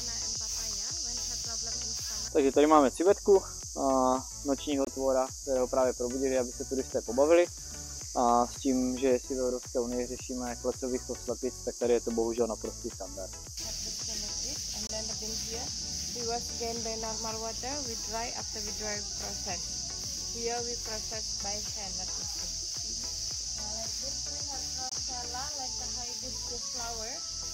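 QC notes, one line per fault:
4.85–4.87 s, 14.87–14.89 s, 24.89–24.92 s: gap between chunks. Three brief dropouts of about 23 ms each break the sound with abrupt, hard-edged silences spaced about 10 s apart. Nothing is missing on either side; the audio just stalls and resumes. The regular spacing points to the stream being delivered in 10-second chunks with a small padding of silence at each join.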